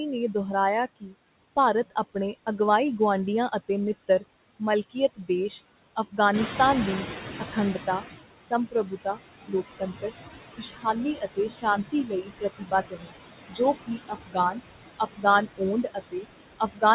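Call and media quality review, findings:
Noise suppressor artifacts, whole clip. Background held down by about 20 dB, sinking in pauses and rising again under speech, so the noise floor pumps with the talker. Probable component: noise suppressor applying per-band, per-frame gain to whatever it classifies as steady noise. The rest of the chain is narrowband, with nothing above 4 kHz, which points to a G.711 mu-law call path.

Speech cut by the noise suppressor, 1.0–2.15 s. Brief dips in speech level, deepest about 16 dB, totalling roughly 150 ms. Quiet segments sound swallowed. Suppressor misclassifying low-energy speech as noise and attenuating it with the background.

Speech cut by the noise suppressor, 3.68–5.29 s. Same symptom, deepest drop about 19 dB, roughly 150 ms affected. Soft portions faint. Noise suppressor gain treating quiet speech bands as noise.

Speech cut by the noise suppressor, 7.53–16.83 s. 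Repeated level drops across the whole stretch, deepest about 21 dB, around 3 s affected in total. Speech intermittently faint. Suppressor mistaking quiet speech for noise and turning it down with the background.

Noise suppressor catching up, 6.33–8.2 s. Room noise steps up by about 11 dB near 6.5 s and passes through with reduced suppression at first, then sinks over 1.87 s until the cut reaches about 17 dB. Mechanism: the suppressor's noise estimate lags a sudden background change and adapts gradually.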